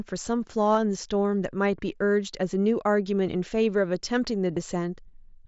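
At 0.74 s and 4.54 to 4.57 s, concealed Bluetooth headset packet loss fills missing packets with copied recent waveform. The first is nearly hidden, the second briefly buzzy, showing repeated periodic cycles.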